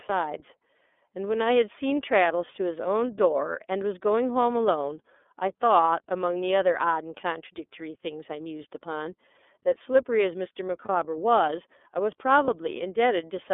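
The whole recording has passed through the iLBC codec, a narrowband VoIP coder that encodes each frame's excitation independently of the frame before it. Everything is confined to a band of roughly 250 Hz to 3.5 kHz, so the speech sounds thin and telephone-like. The coding damage is plainly audible as a slightly rough, synthetic edge on the voice, consistent with the 13.33 kbps mode and its 30 ms frames.

Lost iLBC frames then occur twice, at 10.85 s (10.85 to 10.89 s) and at 12.45 s (12.45 to 12.49 s). Each time, a single 30 ms frame failed to arrive. The decoder filled the gap by repeating the last pitch cycle blended with noise, so each dropout comes across as a brief held, faintly buzzy vowel sound. Because iLBC frames stand alone, the speech recovers cleanly immediately after each gap.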